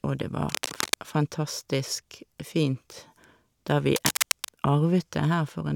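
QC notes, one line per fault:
0.48–0.95 s and 3.96–4.52 s, cable scratch noise: a worn cable, plug or control was likely shifted, making its contact resistance jump erratically. This lays dense, uneven bursts of crackle only a few decibels under the speech, heard as brief scratching or rustling.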